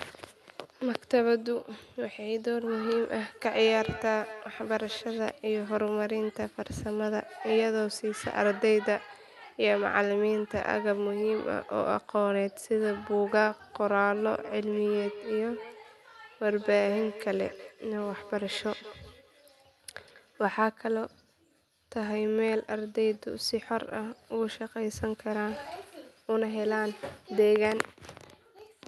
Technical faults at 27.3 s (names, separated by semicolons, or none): none